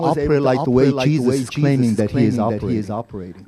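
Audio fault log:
throughout, doubled audio track: every stretch of speech repeats as a clean full-band copy about half a second later, roughly 5 dB quieter, with no decay or room colour. This is likely a slower second capture path. The waveform and spectrogram show each burst duplicated, fainter, at that fixed offset.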